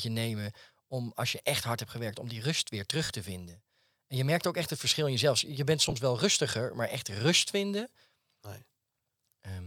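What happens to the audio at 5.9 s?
Between 5.83 and 5.93 s, just before "wel rustiger maar echt", the speech briefly turns grainy and smeared. These are lost LE Audio frames: about 37.5 ms went missing in short gaps across 90 ms, and the LC3 decoder filled them with the previous spectrum under randomised signs.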